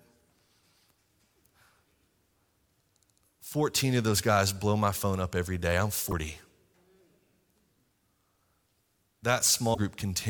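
At 6.08 to 6.13 s and again at 9.71 to 9.78 s the speech is briefly disrupted, the sign of damaged data in a compressed stream. Corrupted bytes make the decoder misread the frames there and lose sync until it finds a valid frame header. On a spectrogram each event is a brief disruption that cuts across the harmonic pattern. The waveform shows an abrupt discontinuity.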